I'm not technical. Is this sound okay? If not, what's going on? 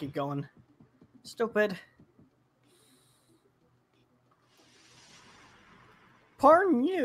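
No. Throughout the clip the level keeps rising and falling, so the sound pumps and thins out, with held parts fading while sharp starts still come through. A noise suppressor built for speech was applied to music or sounds, treating steady material as noise.

The sound was cut by the noise suppressor hardest from 0.5 to 1.25 s, from 1.86 to 4.72 s, and from 5.84 to 6.39 s. In those stretches the sound sinks noticeably and its fading tails get chopped short.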